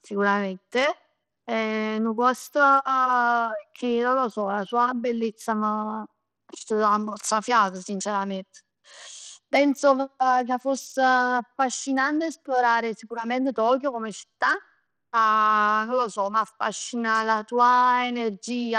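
From start to finish the speech carries a gritty, grainy edge, with the treble thin and flickering in and out. The likely cause is Bluetooth SBC compression at a starved bit pool, fitting roughly 80 kbps, where the top sub-bands lose their bits and the rest are coarsely quantised.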